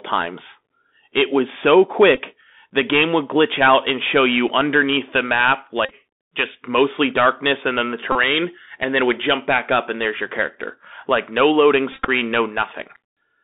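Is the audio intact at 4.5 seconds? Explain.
No. At 4.48 s, between "out and show you" and "underneath the map", there is a brief buzzy tick, a tiny stutter where the same sliver of sound plays twice. This is a Bluetooth headset packet repeated: the link between headset and phone dropped audio, and the chip filled the gap by decoding the last good packet again. About 7.5 ms was lost, which fits two consecutive 3.75 ms packets. With so short a run, no sustained buzz forms, only the small tick before normal audio resumes.

Under that moment, as through the whole clip, the speech is thin and band-limited, roughly 250 Hz to 3.6 kHz, with a granular hiss beneath it and scratchy, harsh s sounds. This is the Bluetooth CVSD headset codec, with its 64 kHz one-bit stream that only signals up or down with an adapting step. Loud high content outruns that step and distorts, and the codec damage is plainly audible here.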